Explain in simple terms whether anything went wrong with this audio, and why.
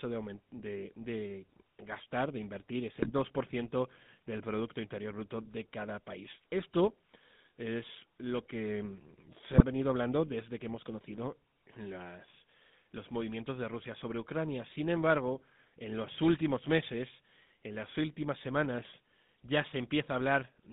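The whole recording went through the GSM full-rate codec, the compression used by early mobile phones. Rather than storing the actual sound wave, it sends a rough model of the throat and mouth and rebuilds the speech from a stripped-down series of pulses. It also keeps only a narrow band, roughly 150 Hz to 3.7 kHz. The result is a thin, buzzy, gravelly speech sound throughout, plainly audible the whole time.

Twice the signal suffered GSM bit errors: corrupted data reached the decoder, scrambling the values that set the tone, pitch and loudness of the rebuilt speech over a few consecutive moments. This happens from 3.0 to 3.11 s, and more mildly from 9.52 to 9.62 s, where the speech briefly breaks into a squawk or gargling pop before recovering.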